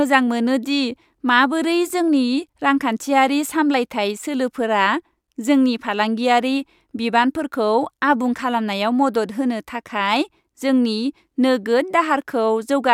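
No technical faults can be heard anywhere in the recording.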